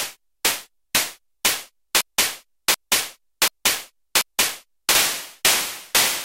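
A broken-record loop runs from 2.01 s to 4.95 s. A fragment of about 0.74 s of the audio plays four times in a row, each copy identical and butted directly against the next, so the sound stutters in a fixed cycle instead of moving forward. The likely cause is a stall in the player, encoder or stream that kept resending the last piece it held. Whatever audio belonged in that stretch is missing.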